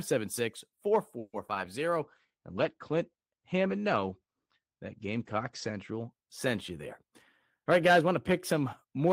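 At 1.19 s the speech stalls in a call audio freeze, with a fading continuation of the last sound and about 30 ms of silence at the end. The stall lasts until 1.35 s. Packets were likely held up, so the jitter buffer ran dry. When the audio resumes, it continues where it stopped. About 140 ms of extra delay remains.

From 1.47 to 1.50 s there is a skip ahead. Roughly 70 ms of speech is dropped to win back part of that delay. A short 10 ms bridge joins the two sides, so the speech jumps forward almost seamlessly.

At 1.54 s a short concealed packet loss follows. About 20 ms never reached the decoder in time. The receiver patched the hole from the preceding sound, which leaves a brief smear or wobble where a small sound may vanish.

Between 1.86 and 2.40 s a jitter buffer slow-down plays the speech at 90 percent speed. Repeated pitch periods add 61 ms to rebuild a reserve. The pitch stays the same, but sounds stretch out.

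From 2.02 to 6.18 s a call bitrate drop takes the encoder from 32 to 14 kbps for about 3.7 s. The bandwidth falls from 20 kHz to 8 kHz. The speech turns muffled and rough just before "sent you there".

After "sent you there", from 7.58 to 9.07 s, a jitter buffer speed-up runs at 106 percent. Small pitch-period pieces, roughly 100 ms in total, are cut to shrink excess delay. The pitch holds steady, but the speech sounds slightly hurried.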